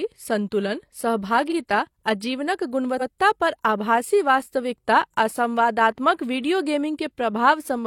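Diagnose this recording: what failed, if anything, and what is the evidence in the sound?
The failure is repeated frames, at the codec or storage stage. The speech stutters twice. At 1.47 to 1.53 s a 42.7 ms block plays a second time. At 2.97 to 3.05 s an 85.3 ms block repeats once, just before "पर आभासी वास्तविकता". The block sizes fit one and then two compressed frames being written or sent twice. The decoder replays each copy in full. That adds about 43 ms and 85 ms to the running time.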